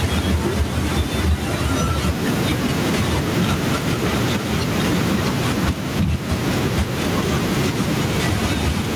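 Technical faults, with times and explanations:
Throughout, gain pumping: the gain swings around 10 dB, ducking under speech and squashing loud and soft parts closer in level. Likely a fast limiter taming gain set too high.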